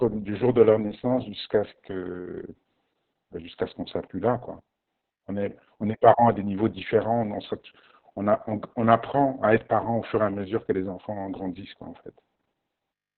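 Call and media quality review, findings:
Opus voice compression, throughout. Speech band-limited, nothing above 4.3 kHz; muffled, hoarse, robotic. Probable component: Opus encoder in SILK-only narrowband mode, coarse excitation coding, heavy damage. Consistent with a bitrate near 6 kbps and long 60 ms frames.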